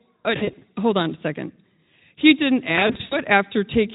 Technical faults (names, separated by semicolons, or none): VoIP packet loss concealed by the speech codec